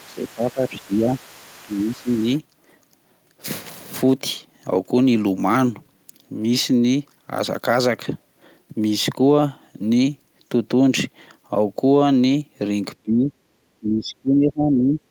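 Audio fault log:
0.00–0.05 s, 0.37–0.85 s and 1.15–2.40 s, other side's voice leaking through: a faint second voice sits roughly 25 to 30 dB under the speech, likely loudspeaker echo the canceller missed. On a spectrogram it shows as weak, separate harmonic traces running beneath the main ones.
0.00–1.08 s, 1.63–2.09 s, 13.03–13.32 s and 13.80–15.00 s, speech suppressed in double talk: the voice sinks by about 15 to 20 dB, likely because the echo canceller treated overlapping talk as echo. The waveform envelope visibly caves in.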